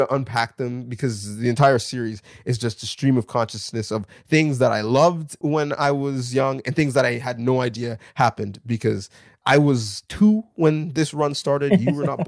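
No technical faults can be heard anywhere in this recording.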